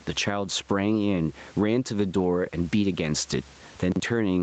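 Gain pumping runs through the whole of this speech recording: the level keeps heaving by roughly 15 dB. That pattern is most likely a fast limiter or compressor clamping down on input gain set far too high for the microphone, so loud and quiet passages are squeezed toward one level and the speech sounds flattened. Chunks out of order appear between 3.92 and 4.0 s: a 40 ms slice of audio plays one slot too late, after the piece that should follow it. Nothing goes missing, but the sequence is scrambled, so that brief stretch sounds jumbled, with abrupt splices where the slices meet.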